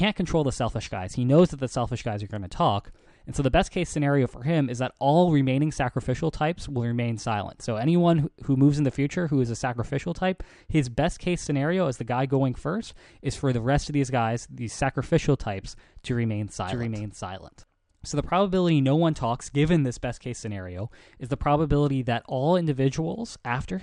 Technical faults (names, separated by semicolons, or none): doubled audio track